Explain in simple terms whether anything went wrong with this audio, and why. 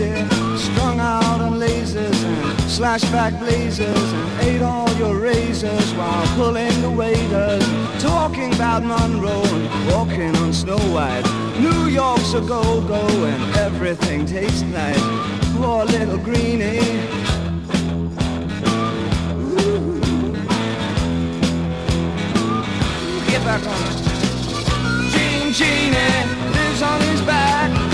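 Nothing went wrong here: no faults can be heard anywhere in this audio.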